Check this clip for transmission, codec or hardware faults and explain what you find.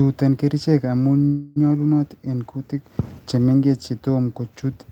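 One transmission fault is present: a call audio freeze from 1.25 s to 1.58 s in the speech. The sound hangs at the point it had reached and is drawn out as a fading buzz or hiss for about 0.31 s, then the speech resumes exactly where it stopped. The likely cause is packets delayed in transit, leaving the receiver's jitter buffer empty so it extended the last audio. Nothing is lost, but everything after runs about 0.31 s later.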